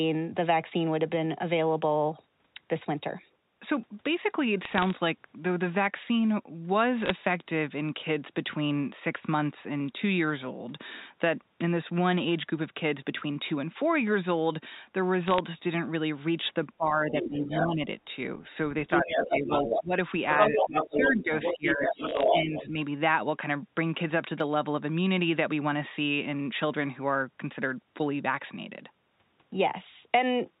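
Bit errors on a digital phone line appear first at 4.65–4.90 s, then at 7.00–7.10 s and 15.28–15.39 s. Flipped bits corrupt single samples and produce sharp ticks, which show as isolated waveform spikes and thin vertical spectrogram lines.

From 16.77 to 17.83 s, speech is suppressed in double talk, dipping by up to about 15 dB. The likely cause is an echo canceller turning down both talkers. This shows as envelope dips and a thinning high end on the spectrogram. Within that stretch, at 17.15–17.63 s, the other side's voice leaks through about 5 dB below the speech, leaving a second harmonic pattern overlapping the first.

The leakage returns at 18.88–19.84 s at roughly equal level, overlapping suppression from 19.0 to 19.92 s with drops of up to about 15 dB. At 20.31–22.63 s, the leaked voice is again about as loud as the speech, while suppression from 20.48 to 22.78 s pulls the level down by up to about 10 dB. 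In the middle of this, at 22.09–22.23 s, a final cluster of bit-error ticks adds more spikes.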